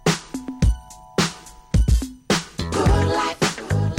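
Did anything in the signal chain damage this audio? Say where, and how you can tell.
Yes: a harsh crackle rides the loud peaks throughout, which is hard clipping, roughly 7 dB of overdrive at a converter or level stage, flattening a small fraction of peaks.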